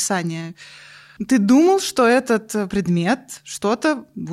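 No audible technical faults.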